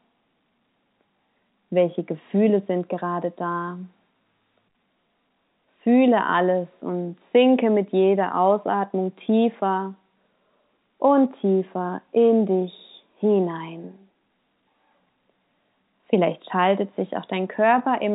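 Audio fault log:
Nothing stood out on listening to this speech.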